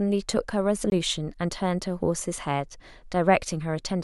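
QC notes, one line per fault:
0.90–0.92 s, Bluetooth dropout: a packet likely failed to reach the headphones in time and was discarded, so the speech cuts to silence for about 20 ms, which fits a single lost packet, then resumes further on, as though it had kept playing underneath.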